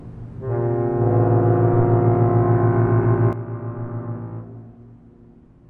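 A sudden gain jump arrives at 3.33 s and holds to the end of the clip. At that instant the whole signal drops by about 12 dB in a single step, with no fade, and the background noise falls by the same amount as the foreground sound, so the level change sits on everything at once rather than on any one source. The likely cause is a digital gain setting or bit shift applied between consecutive samples without a ramp.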